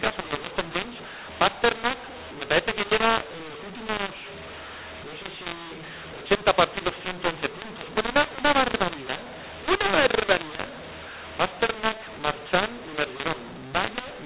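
From start to finish, mu-law and A-law are mixed up. A-law samples are decoded as mu-law. Levels scramble, speech turns harsh, and pauses hiss.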